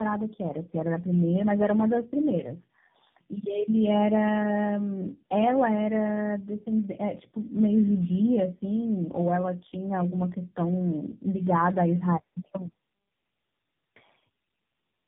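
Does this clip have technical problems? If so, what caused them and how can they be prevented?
Yes. Throughout the speech sounds rough, muffled and warbly, with nothing above about 3.6 kHz. This is tandem speech coding: the call passed through three low-rate speech codecs in a row, consistent with AMR-NB, GSM full rate and AMR-NB again, with plain telephone links between them. Each border decoded the audio and a new coder re-coded output already damaged by the previous one, so the errors accumulated. Prevention: keep one codec end to end, using transcoder-free operation where the networks support it.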